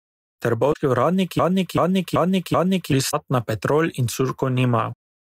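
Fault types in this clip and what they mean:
Damaged data in a compressed stream: Part of the encoded speech stream was corrupted. The decoder could not read those frames correctly. It lost its place and hunted for the next valid frame header. Each event is a short chirp or blip of about 70 ms. It happens twice. The first is at 0.69 s and the second at 3.07 s.
Broken-record loop: From 1.39 s to 2.92 s, one fragment of about 0.38 s repeats exactly, back to back. It plays four times over about 1.5 s. The speech that should have filled that span is missing, so the sound jumps on when the loop ends. The likely cause is a player or stream stall that kept resending the last buffered piece.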